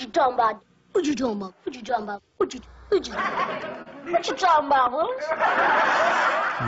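The audio, carried over a call path whose G.722 coding at what sounds like 64 kbps leaves nothing above 8 kHz, has two tiny freezes at 1.89 s and 4.87 s. Each is a flat hold lasting about 1.3 ms, which fits a 64-sample gap, and the audio resumes softly with essentially nothing lost. This is an underrun with held sample: the output buffer emptied and the converter held its last value until data returned. Between 3.82 s and 3.88 s, a sound lingers unnaturally for 37 ms with a slight buzz or dip, then carries on from the same point with nothing missing. That is a short stall from a late packet: the jitter buffer ran dry, the receiver stretched the last sound to fill the wait, and the playout delay grew by 37 ms.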